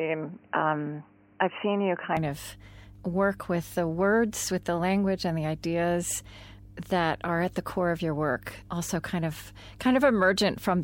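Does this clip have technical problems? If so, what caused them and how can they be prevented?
Yes, two things. There's mains hum through the whole clip, a steady 50 Hz drone sitting only about 20 dB under the speech, which points to a ground loop or a transformer bleeding the power line into the signal. Fix the grounding, use balanced cables, and keep power supplies away from the mic.

From the start to about 2.17 s the speech sounds dull and boxy, with nothing above 3 kHz and a level a few dB off. It clears up abruptly with no gap. That's likely the input switched to a poorer device, such as a headset's call profile, before jumping back. Lock the input device in the system settings before recording.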